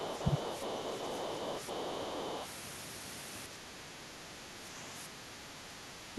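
From the start to 2.47 s, the echo canceller likely failed to fully remove the far end's loudspeaker playback from the microphone, so the other side's voice leaks through. It sits well below the talker, around 25 dB down, as a faint second voice running underneath the speech for the first two and a half seconds.

During that same stretch, both sides talk at once, and the canceller likely cannot tell its own talker from the echo, so it turns everything down. This speech suppression in double talk first hits from 0.22 to 0.37 s as a brief, deep dip in the talker's level, then again from 2.0 to 2.06 s as a much shallower, very short sag. The last and deepest drop comes at 6.1 s, where the speech is pulled down hard for the final tenth of a second.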